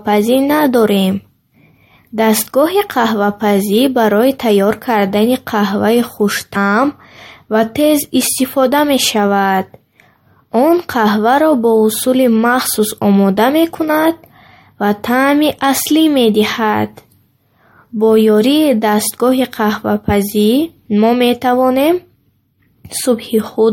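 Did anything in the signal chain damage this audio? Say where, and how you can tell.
Yes. At 6.55 s, right after "барои тайёр кардани қаҳваи", there is a brief glitch, the mark of damaged data in a compressed stream at the codec or storage stage. Corrupted bytes in the encoded file made the decoder misread a frame, lose sync and search for the next valid header, so a moment of garbled output replaced the speech. A plain analogue click or a buffer dropout would be a sharp tick or a silent gap.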